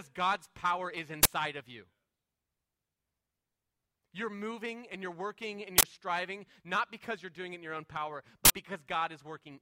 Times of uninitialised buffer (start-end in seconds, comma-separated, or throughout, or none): 1.23-1.25, 5.78-5.83, 8.45-8.50